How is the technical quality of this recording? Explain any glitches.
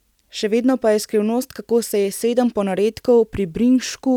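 The technical quality of this recording is sound, with no glitches to explain.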